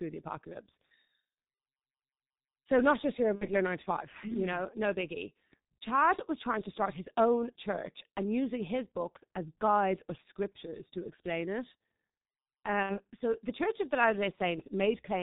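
It's a speech clip, and the whole thing has gone through the G.723.1 codec, with heavy damage. Nothing gets through above 4 kHz, so it sounds muffled, and the slow-moving voice model leaves it hoarse with smeared consonants. The thinness points to the low 6.3 kbit/s mode. There are also two spots of VoIP packet loss concealed by the speech codec, at 3.35–3.54 s and 12.83–12.99 s. The missing stretch, roughly 60 ms each time, fits two 30 ms frames dropping out. The decoder fills the gap by repeating its last pitch and filter at falling gain, so you hear a buzzy tone or coloured noise that fades. Because each frame builds on the one before, the sound stays weak or distorted for a short while after the packets come back.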